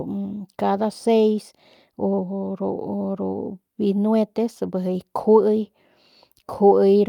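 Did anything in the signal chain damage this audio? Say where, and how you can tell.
No, nothing in the signal chain damaged this audio.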